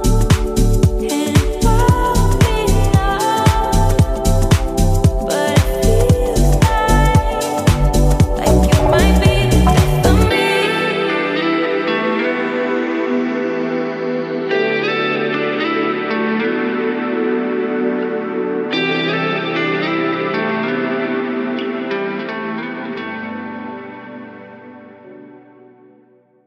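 No technical faults can be heard anywhere in the recording.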